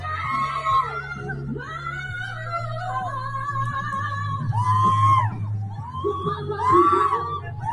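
A noise suppressor applied to music or sounds runs through the whole clip: a speech-oriented suppressor is treating sustained, steady parts of the sound as background noise and turning them down, so the level swings by roughly 10 dB as it decides what to keep. Onsets pass largely intact while held portions and decays sag, giving the audio a pumping, thinned texture as gain rises and falls with each new event. Sound cut by the noise suppressor is heard from 5.65 to 5.92 s and again from 7.39 to 7.65 s, each dip lasting around 0.3 s and reaching about 7 dB below the surrounding level. In these stretches the suppressor has classed the sound as noise and pulled it down harder than elsewhere, so the steadier or fading content sinks in level.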